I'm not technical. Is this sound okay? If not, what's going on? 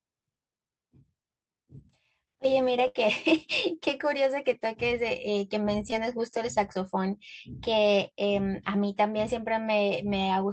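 No. There are three problems.

From the start until about 4.8 s there is sample clock jitter. The timing of the recording gear wobbles slightly, by a few millionths of a second. That adds a hiss or roughness that gets stronger on loud and bright parts of the speech.

From 2.87 to 2.97 s there is a burst of packet loss. A chunk of the call, about 80 ms, never arrived. The receiver stretched the last sound for about 70 ms, fading it out. You hear a brief held buzz or hiss. Then the speech jumps ahead.

From 5.91 to 5.94 s there is short concealed packet loss. About 20 ms of audio went missing. The receiver briefly patched the gap by continuing the previous sound. It comes across as a tiny smear or wobble, and a short sound may drop out.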